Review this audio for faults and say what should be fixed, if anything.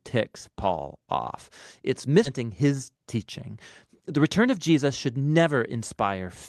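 At 2.25 to 2.27 s there's a skip ahead: nearly half a second of speech got dropped, and playback jumps straight into "his teaching" with no gap. A jitter buffer that discards less aggressively on overflow would prevent it.

From 4.17 to 5.71 s the jitter buffer speed-up kicks in, cutting pitch periods so the speech runs about 109% fast, roughly 150 ms shorter, at the same pitch. Gentler, slower delay reduction would avoid that.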